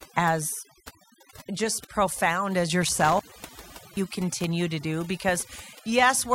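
Speech recorded with overdone noise removal throughout: the reduction is set so hard that the background falls to near silence with twinkling specks, and quieter voice components vanish. Between 2.82 and 4.27 s an intermittent contact opens the line for about 0.78 s in total, cutting the audio with crackle at the edges and leaving faint hiss while the connection is broken.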